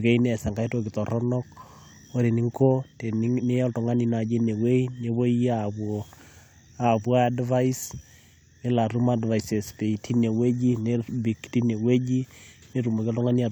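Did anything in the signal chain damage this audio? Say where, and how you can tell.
No, nothing along the signal chain has left an audible mark on this speech recording, which reaches the listener intact at every stage.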